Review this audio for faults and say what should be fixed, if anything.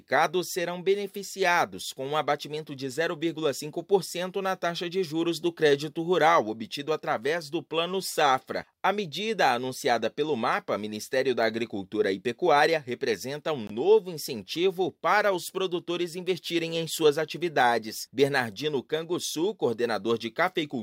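A corrupt frame muted cuts the sound at 13.67 s. The silence starts abruptly and lasts 34 ms, which fits one rejected frame. Flipped bits made the decoder discard it. The player filled the slot with silence. Timing holds. Prevent it with error-checked transport, retransmission and decoder loss concealment.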